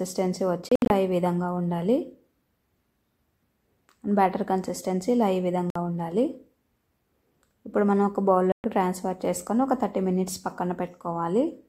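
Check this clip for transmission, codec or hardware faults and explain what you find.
Three brief silences break the sound, at 0.70 to 0.90 s, 5.70 to 5.76 s and 8.52 to 8.64 s. Each is likely a Bluetooth dropout: packets arrived late and were discarded. The sound cuts out abruptly, then resumes further along. The first event is several gaps, the longest 67 ms.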